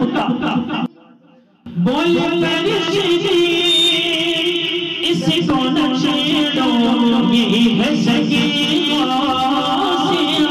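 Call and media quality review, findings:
0.86–1.66 s: sound collapses by about 22 dB. Likely one channel inverted, so the shared centre content cancels when summed to mono and only the left-right difference survives. Check the stereo path and the downmix.

3.43–4.28 s: loudspeaker feedback squeal, a steady 3.6 kHz tone swelling up in about a third of a second and ending up a few dB above the programme. A mic is picking up its own speaker, and loop gain tops unity there.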